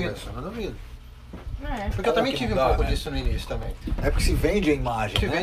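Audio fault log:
2.49 to 3.82 s, CD scratch ticks: a run of eight short, evenly spaced clicks, roughly six a second, the longest only a few milliseconds. That steady rhythm is the tell. A scratch on the disc wipes out more data than error correction can rebuild, and it comes round once per revolution, so the player patches or mutes those samples on every pass, leaving a tiny tick each time.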